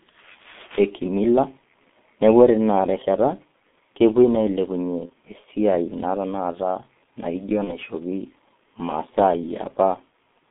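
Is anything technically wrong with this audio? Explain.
Yes. Two problems can be heard.

The whole clip carries G.723.1 codec damage. The speech is squeezed into roughly 200 Hz to 3.6 kHz, and its voice model updates only every 30 ms. The heavy muffling and hoarseness fit a rate near 6.3 kbit/s. Consonants blur throughout.

VoIP packet loss concealed by the speech codec appears at 5.06 to 5.11 s, and again at 7.64 to 7.80 s, just after "naa tenakata naijo". Each gap fits a single lost 30 ms frame. The decoder repeats its last pitch and filter with falling gain, so the sound turns into a buzzy tone or coloured noise that fades. The voice stays weak or distorted for a while after each gap.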